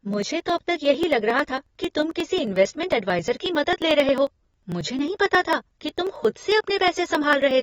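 From the start, the speech sounds dull and smeared, with nothing above 7.6 kHz and a warbly fizz on sibilants, likely AAC compression at a low bitrate around 24 kbps. From 0.14 s to 7.51 s, periodic USB or driver dropouts skip roughly 10 ms of audio every 0.09 s, around seventy regular ticks heard only while there's signal.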